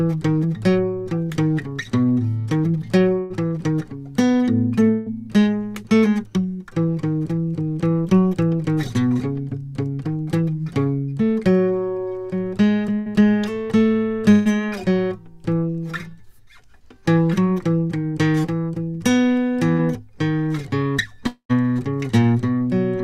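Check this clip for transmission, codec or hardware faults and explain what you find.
Two kinds of transmission fault affect this music, both from network delivery rather than codec or hardware.

Burst of packet loss occurs at 3.19 to 3.33 s, 4.91 to 5.09 s, 12.99 to 13.22 s, 14.31 to 14.48 s and 19.72 to 19.81 s. Each time a short run of packets failed to arrive, and the receiver stretched the last sound over the gap, letting it fade. The concealed stretches last from 64 to 150 ms, and when playback resumes between 40 and 120 ms of the music is simply gone.

Long network dropout is heard from 21.27 to 21.52 s. The music gives way to about 225 ms of filled-in sound: the last moment is held and fades, and the final 90 ms is silence. Playback then picks up further along with about 200 ms missing. The likely cause is a longer interruption in packet delivery, after which the stream resumes slightly shifted in time.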